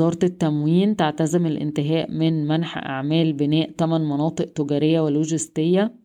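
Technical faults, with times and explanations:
No technical faults are present anywhere in this speech recording.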